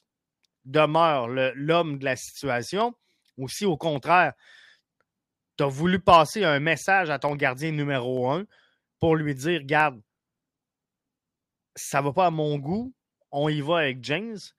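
Sharp single clicks at 7.29 s and 8.17 s, each a thin vertical line on the spectrogram and a waveform step, are likely dropped samples, a fraction of a millisecond lost.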